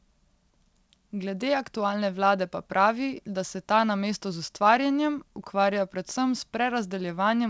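No technical faults can be heard anywhere in the speech. It comes through a working WebRTC call path whose wideband codec, which fits G.722, leaves nothing above 8 kHz.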